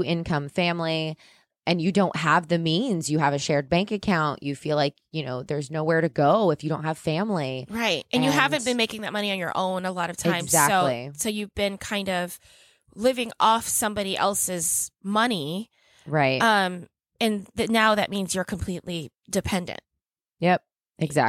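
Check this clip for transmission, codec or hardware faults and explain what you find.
Nothing in the signal points to a transmission, codec or hardware fault: the speech arrives continuous and intact throughout.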